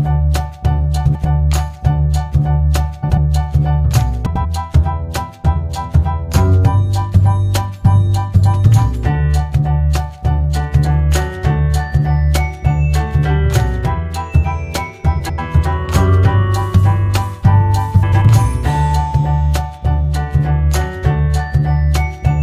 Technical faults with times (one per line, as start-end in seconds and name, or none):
1.05-1.25 frames out of order
3.02-3.18 frames out of order
4.26-4.45 frames out of order
15.19-15.39 frames out of order
18.03-18.22 frames out of order